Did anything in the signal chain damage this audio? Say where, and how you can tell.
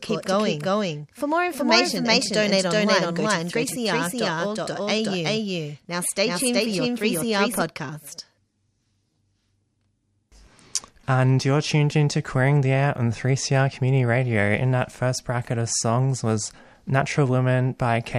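Yes. From the start until 7.62 s, a doubled audio track is present, likely from the speech being captured twice, the second time through a slower routing path. A full-band copy at about equal level trails by roughly 0.4 s, dry and without decay, and cuts off abruptly at 7.62 s.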